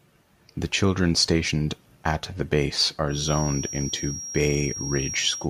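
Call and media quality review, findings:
Thin, slowly swelling 5.6 kHz feedback whistle from 3.06 s to the end, after "stationed at the base", roughly 10 dB under speech; likely speaker-to-mic loop sitting just at the feedback point.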